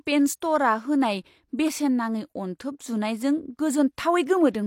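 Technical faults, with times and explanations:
0.40 s, pre-echo: the codec's block-wide quantisation noise leaks into the quiet just before a sharp attack, so a brief hiss of about 19 ms precedes and softens it.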